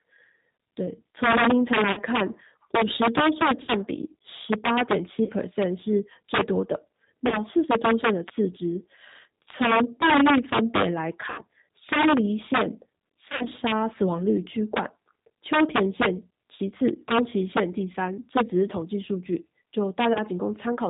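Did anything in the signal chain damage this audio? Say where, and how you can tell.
Yes, damage occurs at three stages. In the sample-format conversion or gain stage, the signal was pushed about 8 dB past full scale into an integer path with no limiting. The loudest peaks, a small fraction of the samples, around 2 percent, exceeded the maximum and wrapped to the opposite sign. This integer overflow is audible throughout as harsh, violent cracks on loud syllables, far sharper than ordinary clipping, because each affected peak jumps across the entire range.

The codec stage is G.729, most likely the G.729A variant at 8 kbit/s, and its damage is plainly audible across the whole clip. Speech is rebuilt from a vocal-tract filter, a pitch predictor and a few pulses per subframe rather than sent as a waveform, so it sounds slightly rough and synthetic. Everything above 4 kHz is missing, which leaves sibilants dull and the voice band-limited.

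On the network side, VoIP packet loss concealed by the speech codec appears at 1.92–2.01, 3.62–3.72, 5.24–5.31, 7.28–7.38, 11.30–11.42, 13.29–13.49, 16.56–16.62 and 20.13–20.19 s. The gaps last 20 to 100 ms, and the one near 13.3 s is scattered losses whose longest run is 60 ms. In each gap the decoder extends its last pitch and filter with falling gain, so the speech smears into a fading buzzy tone or coloured noise and stays weak briefly afterwards.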